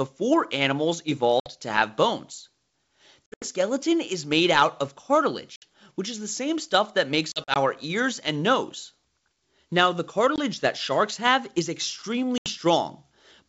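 Hard-edged silent holes, some broken into several short gaps, cut the speech at 1.40–1.52, 3.26–3.48, 5.56–5.64, 7.32–7.57, 10.36–10.38 and 12.38–12.48 s. Each is followed by brief, slightly distorted sound. This is packet loss on an ADPCM call: silence replaced lost packets, throwing the decoder's predictor and step size out of step with the sender's.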